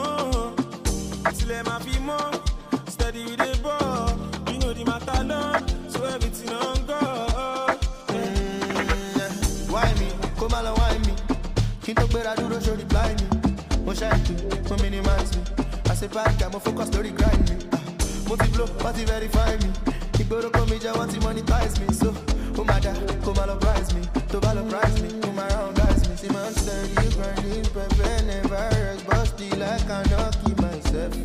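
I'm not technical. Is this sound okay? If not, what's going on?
No. From 4.26 to 10.26 seconds, the adaptive stream dropped to a lower bitrate. The connection likely slowed, so a rougher version played. Codec artefacts rise during that stretch. The change is sudden, with no gap, then clarity returns.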